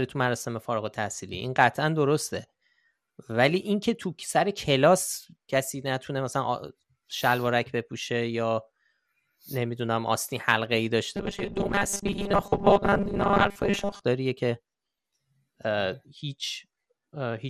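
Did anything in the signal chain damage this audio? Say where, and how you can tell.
Yes, in three places. Running through the whole speech clip there's MP2 compression damage at the codec stage: the top end sounds dull, upper bands seem to flicker in and out, and there's a gurgly, grainy edge on what's left. That's the sound of a Layer II encoder short on bits, likely running at something around 80 kbps, switching off high sub-bands and quantising the rest coarsely.

From 1.27 to 1.51 s there's a quarter-second burst of DAB burbling, short blips of noise in single sub-bands over the speech. It points to the transmission path: weak reception letting a small fraction of bit errors slip past error correction into the MP2 stream. That corrupts sample values and scale factors, so individual sub-bands jump in level for up to a frame at a time.

Then from 11.17 to 14.05 s the speech goes robotic, a stiff metallic buzz pitched at 200 Hz that still roughly follows the speech. 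That's a driver or buffer problem, likely audio arriving too slowly, so the software keeps replaying the last chunk and skips most of the real audio. A 200 Hz buzz fits a repeated chunk of about 5 ms.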